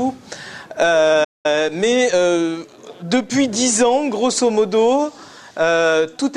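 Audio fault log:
1.24–1.46 s, playback stall: the sound breaks off in mid-flow and the output drops to silence for roughly 200 ms before picking up again. The cause is likely the player running dry of buffered data or having its output thread blocked, so nothing reached the output until it recovered.
1.46–3.48 s, time-compressed catch-up: right after the gap, the sound runs about 1.1 times faster for two seconds while keeping its normal pitch. Having fallen behind, the player trims its backlog by removing small slices and cross-fading across each join. That keeps the pitch steady but hurries the pacing until it is back in step at about 3.48 s.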